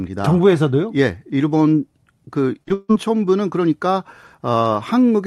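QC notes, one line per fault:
2.63 to 2.72 s, short concealed packet loss: two back-to-back gaps, about 40 ms then 20 ms of speech missing. The decoder stretched the preceding sound from its pitch or as shaped noise, so the audio smears and wobbles briefly before blending back.
2.74 to 2.91 s, long network dropout: a buzzy continuation of the last sound fades over about 150 ms, then a brief silence. The likely cause is a network dropout losing 160 ms of speech. The speech returns without that stretch.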